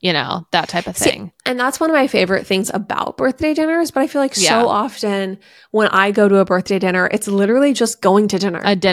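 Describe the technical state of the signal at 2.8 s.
At 2.8 s the speech signal is intact, with no audible technical fault at that moment.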